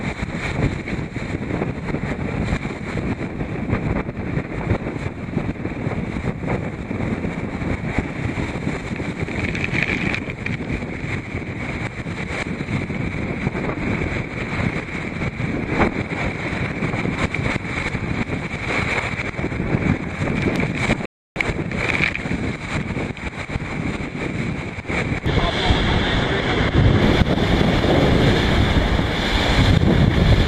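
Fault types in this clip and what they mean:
Loud pop: at 20.56 to 20.58 s a single sharp pop sits on top of the sound, peaking about 15 dB above it while the audio continues underneath. The likely cause is a sudden voltage pulse, from a plug, switch or static discharge, entering the signal path.
Rebuffering stall: from 21.06 to 21.36 s the audio falls silent, then resumes exactly where it stopped, because playback ran out of downloaded data and paused until more arrived. Nothing is skipped, but about 0.31 s of extra time is inserted.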